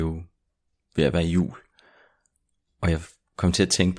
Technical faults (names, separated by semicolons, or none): none